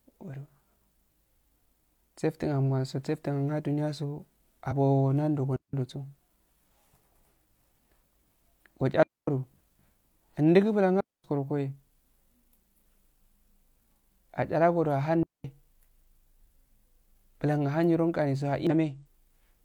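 At 4.67 to 4.73 s, just before "nando go", damaged data in a compressed stream produces a brief glitch as the decoder misreads corrupted frames and hunts for the next valid header. The same happens at 18.67 to 18.71 s.

Digital wireless dropouts follow at 5.56 s (just after "nando go", 171 ms), 9.03 s (247 ms), 11.00 s (238 ms) and 15.23 s (213 ms). Each time the receiver mutes a link that has lost too much data, leaving a clean hole of near silence with a very short fade and no crackle or noise burst around it.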